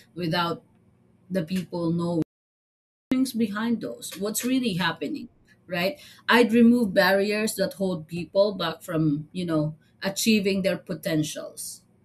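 Speech with an audio dropout to silence from 2.22 s to 3.12 s: the signal cuts off mid-flow and roughly 0.89 s is replaced by silence, with no room tone underneath. The likely cause is a lost input, such as a disconnected device, failed link or brief mute, while recording continued.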